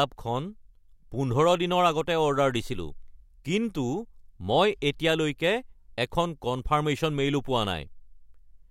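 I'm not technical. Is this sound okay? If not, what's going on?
Yes, this sound is okay; nothing is going wrong in it.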